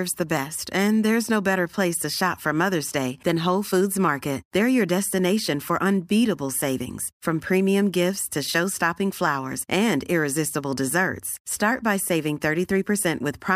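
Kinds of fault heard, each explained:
Nothing here stands out as a technical fault; the speech comes across steady and undisturbed the whole way.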